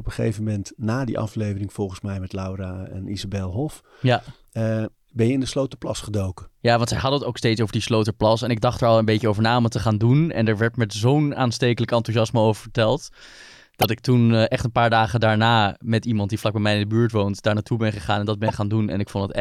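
Corrupt frame decoded at 13.80 to 13.86 s and 18.48 to 18.52 s: damaged compressed data was played anyway, putting energy at the wrong frequencies across about two frames, heard as a chirp, squeak, blip or noise burst.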